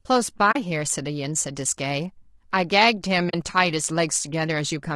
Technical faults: low-delay AAC compression; AAC frame loss with muting

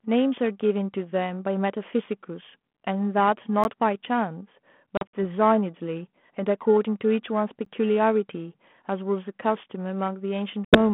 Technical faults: gap between chunks; packet loss on an ADPCM call

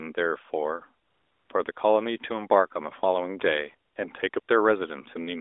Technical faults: AMR comfort noise

